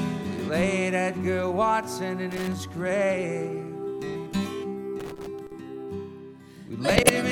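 A worn or dirty contact making and breaking gives loose connector crackle from 2.32 to 2.53 s and again from 5.00 to 5.52 s: irregular bursts of scratchy crackle. From 6.89 to 7.09 s, a corrupt frame decoded despite flipped bits puts energy at wrong frequencies across several frames, heard as a loud chirping, noisy burst.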